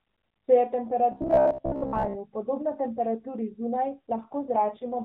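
From 1.12 to 2.17 s, just before "podobna temperaturi", new audio was likely arriving too seldom, so playback kept looping the most recent short chunk while roughly half of the real signal was skipped. This is robotic sound from repeated short buffers. The repetition imposes a fixed buzz at about 66.7 Hz, which points to a chunk roughly 15 ms long. The speech becomes a stiff, metallic drone that still loosely tracks the syllables.

From 4.16 s to the end of the clip, the mobile link apparently pushed the AMR narrowband mobile codec to a lower mode. This AMR rate drop sounds consistent with a step from 12.2 to 5.9 kbps, freeing bits for error protection. The speech keeps the same band limit below 4 kHz and has no gap. Before the drop, the codec's texture is light. After it, the speech turns rougher, buzzier and more synthetic.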